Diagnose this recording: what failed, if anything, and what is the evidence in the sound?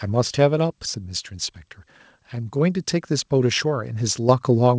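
Microphone volume stepped up at 4.29 s, in call processing: speech and background noise jump together by about 6 dB in a single step, as call software raises the device's input gain abruptly. The G.722 path's audio stops at 8 kHz.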